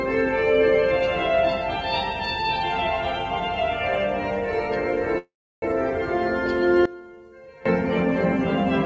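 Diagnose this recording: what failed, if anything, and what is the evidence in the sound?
Call audio freeze, network/jitter buffer stage: from 5.18 to 5.65 s the sound trails off and goes silent for about 0.33 s, then resumes late, likely from a buffer underrun.

One channel inverted, analogue wiring or channel routing: between 6.86 and 7.66 s the summed level drops about 20 dB, likely reversed polarity cancelling common content.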